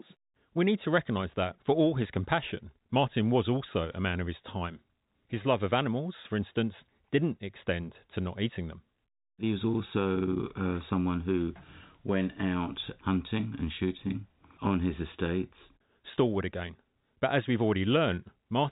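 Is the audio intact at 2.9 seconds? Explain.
Yes, at 2.9 seconds the audio is intact, with nothing there beyond the ordinary telephone-band sound of G.711 telephone coding, whose content stops a little below 4 kHz.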